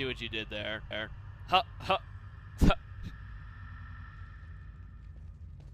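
The sound stutters twice from repeated frames. At 0.91 s a 0.28 s block plays once more, adding 0.28 s until 1.19 s, which fits a run of a few compressed frames being written twice. At 3.69 s a shorter 93 ms block, likely a single frame, plays four extra times, adding 0.37 s until 4.07 s. Unlike a dropout or packet-loss concealment, nothing is missing or smeared. Identical slices are replayed, and the clip grows longer.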